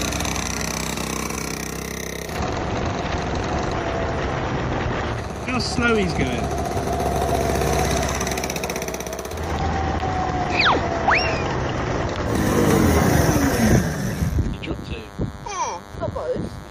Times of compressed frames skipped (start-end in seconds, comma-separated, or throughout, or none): 2.26, 3.68, 14.73